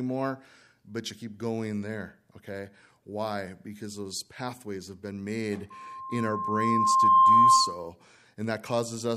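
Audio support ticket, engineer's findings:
Loudspeaker feedback squeal, 5.7 to 7.89 s. Single tone at 1.1 kHz swells over roughly a second and a half to about 15 dB above the speech. Mic picking up its own monitor/PA output; loop gain above unity at 1.1 kHz.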